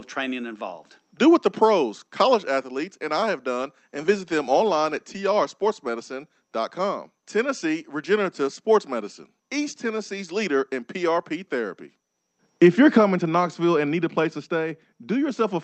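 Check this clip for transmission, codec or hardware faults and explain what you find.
I find no faults to report in this speech clip.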